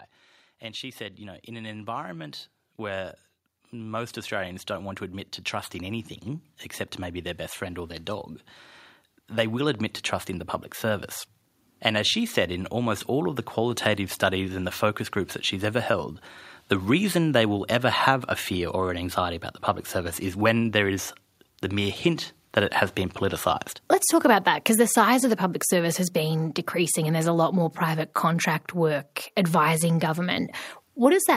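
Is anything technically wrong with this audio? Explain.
Yes. Automatic gain rising runs from 0.6 s to 14.8 s, ending just before "groups that she's ever". The gain control judged the incoming speech too quiet and kept turning its gain up, slowly, by about 17 dB in total. Because it acts on the whole signal, the voice and the background noise swell together. The level climbs steadily over those fourteen seconds rather than jumping, so the room tone grows along with the speech.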